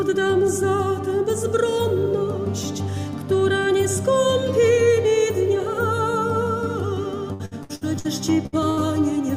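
From 7.33 to 8.07 s, repeated packet loss gives a choppy, robotic texture: about five gaps, each patched by extending the preceding sound, concealing roughly 39 percent of the stretch. Two bursts of packet loss follow, at 8.46 to 8.55 s and 8.70 to 8.80 s, where about 60 ms is lost each time and replaced by a fading continuation before the audio skips ahead.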